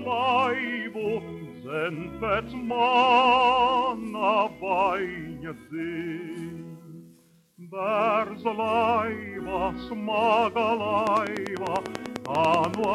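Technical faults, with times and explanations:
11.07–12.85 s, train of clicks: likely interference or a faulty connection injecting regular pulses, about ten per second, roughly twenty sharp ticks standing well above the sound.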